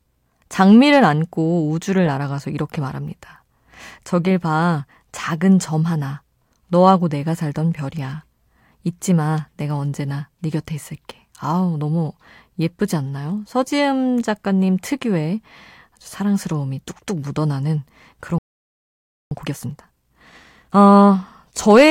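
A speech recording where playback likely starved for data or had its output thread blocked, producing a playback stall from 18.38 s to 19.31 s. The speech cuts off mid-flow and the output goes completely silent for about 0.93 s before sound returns. The gap is long enough to hear as a dropout rather than a pause in the talking. Immediately afterwards the player works off the backlog built up during that gap with a time-compressed catch-up running from 19.31 s to 21.15 s. It removes short slices of the signal and cross-fades across the joins, so the speech plays at roughly 1.5 times its normal rate while keeping its natural pitch. The result sounds hurried.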